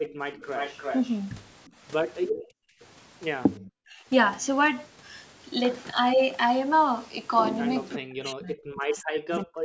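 From 0.32 to 1.16 s a delayed double trails the speech, lagging by about 354 ms and sitting about 10 dB below it. Two brief scraps follow at 1.66 to 1.71 s, at about 35 dB down, and at 2.36 to 2.42 s at about 20 dB down. This is echo leak, likely from a far end on loudspeaker whose echo canceller let part of the played-back speech through its microphone and returned it.

Right after that last scrap, from 2.42 to 2.8 s, the room tone sinks sharply, dropping by as much as about 40 dB for roughly 0.4 s before recovering. That is background gated by the echo canceller. While the loudspeaker was active, the canceller clamped the microphone down hard, taking the ambient sound with it, then released once playback stopped.

At 3.88 to 4.01 s the speech briefly dips, losing around 20 dB for a moment. From 7.97 s to the end at 9.64 s it is pushed down much further, in places almost gone. This is speech suppressed in double talk, likely because both sides spoke at once and the canceller, unable to separate the local talker from the loudspeaker echo, attenuated everything. 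The band stops at 8 kHz, as expected from call microphone processing.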